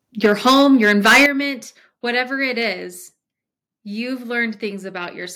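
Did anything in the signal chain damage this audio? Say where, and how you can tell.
Yes. From 0.24 to 1.26 s the speech peaks are flattened, with a harsh crackle on the loudest syllables and roughly 7 percent of samples clipped. This is microphone overload, likely at the converter input, driven about 13 dB too hot. Codec distortion would smear rather than square off peaks.

The level then drops in two abrupt steps, about 3 dB at 0.26 s and about 10 dB at 1.26 s, with the background falling along with the speech. This is the microphone volume being stepped down, likely by call processing reacting to the clipping. A compressor or automatic gain control would ride the level smoothly instead of jumping.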